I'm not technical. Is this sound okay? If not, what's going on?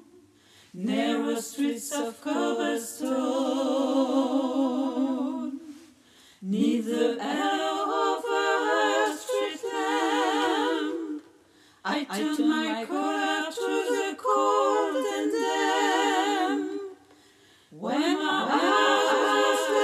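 No. From 18.32 s to the end, there's a doubled audio track: a second, slightly quieter copy of the sound trails about half a second behind. Unlike a room echo, it starts abruptly and doesn't fade away, likely from a delayed second recording path.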